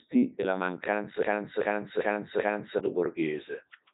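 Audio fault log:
Throughout: Codec 2 vocoder. The speech is robotic and buzzy because the decoder rebuilds it from sine waves using only pitch, voicing, energy and a coarse spectral envelope, discarding the original waveform. The heavy damage fits Codec 2 at its top rate of about 3.2 kbit/s. On a spectrogram, evenly spaced, unnaturally clean harmonic stripes stop dead at 3.8 kHz with nothing above. The waveform looks smooth and periodic, lacking natural fine detail.
1.23 to 2.79 s: broken-record loop. A 0.39 s fragment plays four times back to back, identical each pass, and whatever should have followed in that span never arrives. This is likely a stall where the player or stream kept resending the last fragment it held. On a waveform the same shape tiles exactly every 0.39 s, and a spectrogram shows a repeating block with hard seams at each restart.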